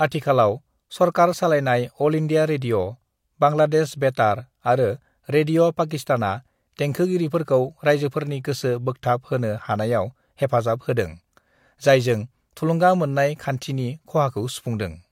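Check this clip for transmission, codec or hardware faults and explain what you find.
I found no faults to explain in this clip.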